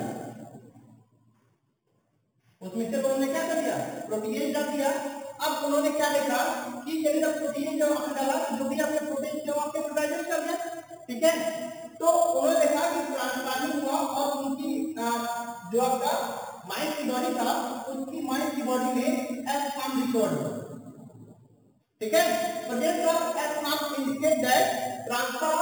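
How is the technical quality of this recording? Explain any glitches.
The recording has one fault running through its full length: imaging from sample-and-hold upsampling. Each sample was held and repeated to reach 44.1 kHz without a smoothing filter, which fits audio first made at 8 kHz. Mirrored spectra result, the lowest spanning 4 kHz to 8 kHz at about -15 dB, heard as a bright metallic fizz tracking the sound's loudness and moving against its pitch.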